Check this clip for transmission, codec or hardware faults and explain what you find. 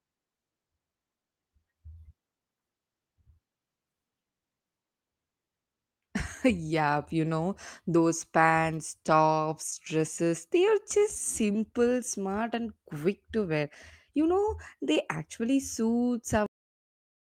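Two faults show up in this speech clip: a cluster of concealed packet losses in the middle and an abrupt truncation at the end.

Scattered short gaps appear between 9.17 and 10.0 s. About five packets went missing or arrived too late, and the receiver covered each hole by extending the sound that came just before it. Together these patches fill roughly 50 ms, about 7% of that stretch, and none is longer than about 15 ms. Because the patches add a few milliseconds, the timing through this section runs slightly long. The speech stays intelligible but picks up small ticks and smeared hiccups. On a spectrogram, each patch shows up as a thin vertical slice where the harmonics freeze or repeat instead of moving smoothly, sometimes bordered by a faint broadband line at the join.

A cut-off end occurs at 16.46 s. The final buffers were never written out, so playback stops partway through a sound rather than fading. 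The audio drops straight to digital silence with no natural decay, which comes across as a sudden chop. On the waveform, the signal ends in a vertical edge followed by a flat, silent line through to the end. The spectrogram shows energy across the band ending abruptly, with only dark emptiness after it.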